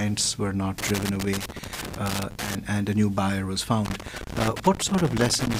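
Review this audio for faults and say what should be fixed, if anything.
Loose connector crackle shows up from 0.78 to 2.55 s and again from 3.85 s to the end: a worn contact making and breaking, chopping the sound into scratchy bursts. Reseat or replace that cable and clean the contacts before the next take.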